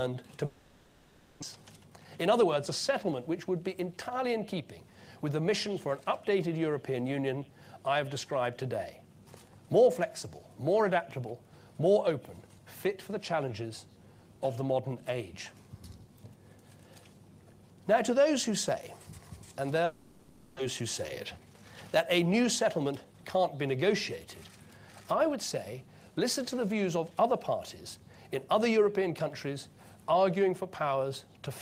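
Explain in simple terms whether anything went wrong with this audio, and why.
Twice the sound breaks off and turns into a buzz or hiss that fades away: from 0.45 to 1.44 s, and from 19.85 to 20.61 s. This is likely a long network dropout. About 0.6 s of audio never arrived each time, so the sound resumes with that piece missing.

Three stretches have a jitter buffer speed-up. Audio had piled up waiting, so the player snipped out tiny pieces to catch up. It runs at 120% speed from 1.56 to 2.70 s. It runs at 107% from 3.11 to 4.80 s and from 21.99 to 23.14 s. The pitch stays the same, but it sounds hurried.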